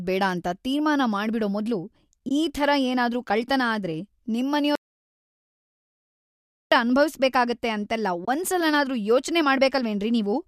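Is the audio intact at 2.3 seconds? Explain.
No. Around 2.29 to 2.31 s there is AAC frame loss with muting: about 20 ms of coded audio never reached the decoder, which filled the gap with silence. The overlapping windows fade the sound out and back in, leaving a brief, soft-edged dropout.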